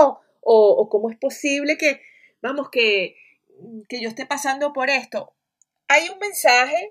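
From the start to the end, the two channels drift apart. They behave as if captured on devices with separate clocks, running a couple of hundred parts per million apart. The delay between left and right grows steadily, reaching roughly one and a half milliseconds by the close. Summed to mono, this creates comb-filter notches that sweep slowly through the spectrum. The speech takes on a slow, swirling flanging.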